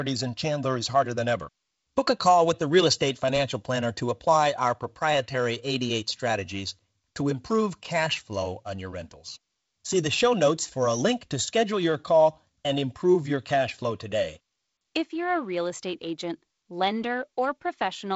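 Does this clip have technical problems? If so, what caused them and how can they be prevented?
No, there are no technical faults in this speech, which passes through G.722 wideband telephone coding at 48 kbit/s with light coding noise and no content above about 7.7 kHz.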